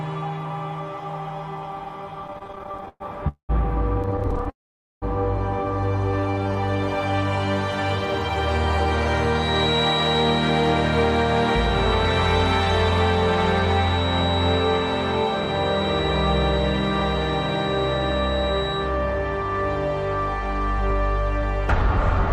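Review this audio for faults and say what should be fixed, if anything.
Repeated stalls (stutter) occur from 2.27 to 3.02 s and again from 4.03 to 4.48 s. Packets arrived late or too slowly, so the jitter buffer kept running dry and the receiver stretched the last sound to bridge each wait. The first run has sixteen short breaks, with 284 ms filled in and the longest gap 114 ms, about 38% of that stretch. The second run has thirteen breaks, with 127 ms filled and none longer than 12 ms. Nothing is lost, but the sound drags and hiccups. A spectrogram shows repeated smeared, flattened columns where harmonics freeze in place. The waveform shows copied cycles and small fades. A more adaptive jitter buffer with a larger minimum delay would absorb these arrival irregularities.

Call audio freezes appear at 3.28 to 3.51 s and at 4.50 to 5.04 s. The likely cause is packets held up in transit, emptying the buffer. 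The first freeze inserts 207 ms, of which about 100 ms decays to silence. The second inserts 521 ms, with about 490 ms silent. Playback then resumes where it stopped, so the timeline shifts later with nothing missing. A spectrogram shows a brief buzzy smear fading into a blank band. The waveform shows a decaying tail, then flat line. Fixing network congestion or prioritising voice traffic with QoS would prevent these holds.

A jitter buffer slow-down runs from 6.20 to 6.49 s. The buffer was rebuilding its reserve, so it repeated single pitch periods, adding 51 ms and playing that stretch at about 85% speed without changing pitch. Sounds there are drawn out. On a spectrogram, formant and harmonic tracks look horizontally stretched at constant frequency. The waveform shows near-identical periods repeated in a row. Steadier packet delivery and a buffer that adapts more gradually would avoid such catch-up stretching.

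A feedback whistle sits at 3.9 kHz from 9.29 to 18.92 s, roughly 10 dB below the main signal. It is likely a loudspeaker-to-microphone loop hovering at the edge of howl, ringing at one frequency without running away. It is heard as a thin steady whistle with slight level wobble behind the sound. A spectrogram shows a sharp horizontal line at 3.9 kHz across those nine-odd seconds. The waveform barely reveals it beyond a fine ripple. Using headphones, lowering speaker gain, or enabling acoustic echo cancellation would break the loop.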